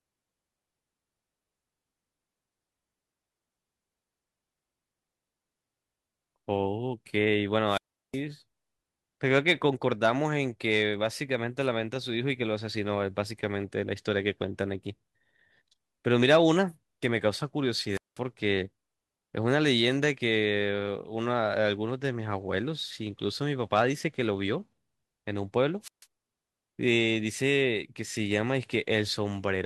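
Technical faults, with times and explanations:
7.66–8.21 s, 17.91–18.19 s and 25.82–26.06 s, wireless microphone squelch dropout: the FM radio link weakens, so hiss rises briefly before the receiver's squelch mutes the output to near silence for about 0.36 s, 0.19 s and 0.14 s respectively, then the speech returns. On a waveform each appears as a short noisy fringe followed by a flat, near-zero gap. On a spectrogram, a broadband haze precedes a dark vertical band where energy nearly disappears.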